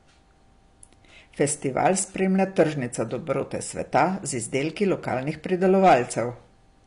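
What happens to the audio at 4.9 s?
At 4.9 s the speech carries the same damage heard throughout the clip, most likely from AAC compression. The encoder, short of bits, discards everything above about 10.6 kHz and quantises the remaining frequency lines coarsely, which fits AAC-LC running at around 32 kbps. The result is a dull, band-limited sound with plainly audible smearing, and a warbling, fizzy texture on sibilants and sustained sounds.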